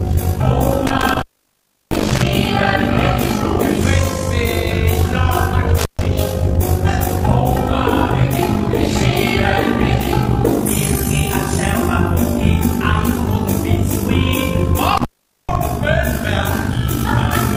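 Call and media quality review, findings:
Fast, rough flutter throughout, level pumping by about 11 dB at around 50 Hz, a robotic tremolo. Overlap-add ripple: frames windowed and rejoined with overlap not summing to constant gain, so gain dips once a frame.

Dropouts with crackle at edges, faint hiss while open: 0.87–2.27 s (open about 0.69 s), 5.78–6.06 s (about 0.14 s), 14.97–15.56 s (about 0.44 s). Intermittent contact: loose cable or plug briefly breaking the signal path.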